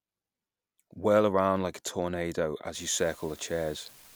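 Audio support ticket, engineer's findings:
Unreliable data bit, 2.74 s to end of clip. Steady fizzy crackle, continuing through pauses. Marginal data line flipping one bit at random; each flip a fixed-size spike, about -43 dBFS. Waveform: scattered equal-height spikes. Spectrogram: broadband speckle floor, including in gaps.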